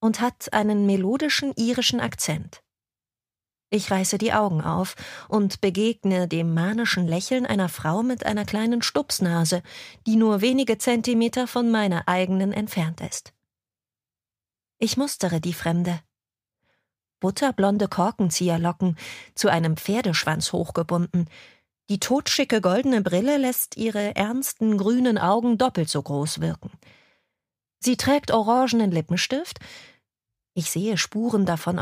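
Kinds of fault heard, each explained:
No dropouts, level problems, noise or other technical faults can be heard anywhere in the audio.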